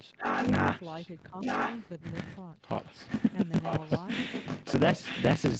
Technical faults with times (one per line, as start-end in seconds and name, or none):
0.00-5.60 block size mismatch (truncated)
0.17-0.50 echo leak
0.81-1.12 echo leak
1.30-1.35 speech suppressed in double talk
1.40-1.83 echo leak
2.00-2.04 speech suppressed in double talk
2.67-3.33 echo leak
3.62-5.60 echo leak